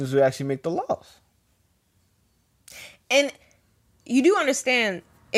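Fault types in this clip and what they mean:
No faults can be heard.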